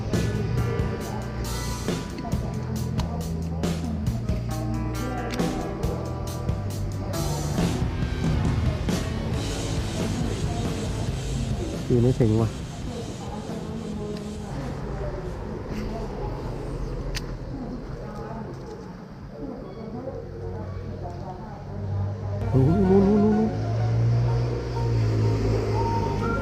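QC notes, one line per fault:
1.38, 3.67, 9.31, 12.22 and 16.37 s: dropped samples. Each moment brings one sharp, isolated click. The five clicks are spaced irregularly. Each likely comes from a fraction of a millisecond of samples going missing. The waveform then jumps straight from one value to a later one. That step is heard as a click and shows as a thin vertical line across the spectrum. The gap is far too brief to remove any audible sound.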